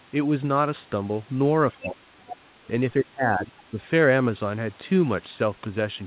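A speech clip carried over a narrowband call path, with nothing above 4 kHz, as fits G.711 A-law coding. From 1.72 to 1.87 s there is other side's voice leaking through, a brief scrap of a second voice about 15 dB under the main talker. This is likely residual echo that the canceller failed to remove from the loudspeaker pickup. It is a separate, fainter voice, not a distortion of the talker's own sound. Speech suppressed in double talk follows at 1.81 to 2.35 s and again at 2.97 to 3.52 s. The talker's level falls by around 25 dB and then about 20 dB for roughly half a second each time. This is likely the canceller ducking everything while both sides spoke. It differs from a network dropout because the sound dips and returns unevenly instead of cutting cleanly to silence.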